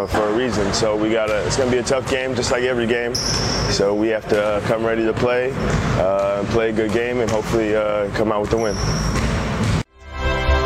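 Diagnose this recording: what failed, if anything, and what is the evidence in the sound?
Codec stage: a corrupt frame decoded at 4.55 to 4.58 s gives a loud, roughly -10 dBFS error burst for about one frame, misplaced spectral energy rather than a dropout's silence.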